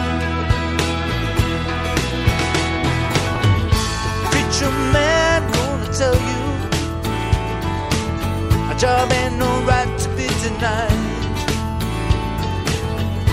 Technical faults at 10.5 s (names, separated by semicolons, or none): none